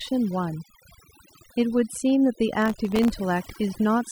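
Overdone noise removal is applied throughout: the reduction was set so aggressively that frequency bands sitting near the noise estimate are pulled down or cut off, taking quiet parts of the speech with them. The background collapses into near silence sprinkled with twinkling specks.

From 2.62 to 3.10 s, processor overload crackle appears. The processor repeatedly fails to finish its very short audio buffers in time, and a few dozen deadlines are missed over this stretch, each one dropping a tiny gap of silence with hard edges. Those gaps merge into a gritty crackling burst over the speech that stops once the overload clears.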